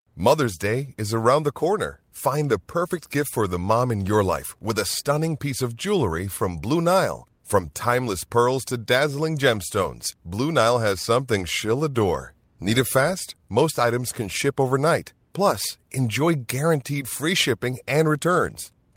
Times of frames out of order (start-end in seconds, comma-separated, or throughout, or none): none